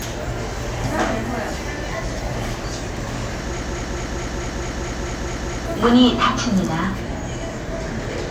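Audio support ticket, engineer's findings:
Broken-record loop, 3.62 to 5.66 s: a 0.22 s fragment repeats nine times back to back, replacing the audio that should have played there. Likely a stalled player or stream buffer re-sending its last chunk. Spectrogram shows identical blocks tiled at 218 ms spacing.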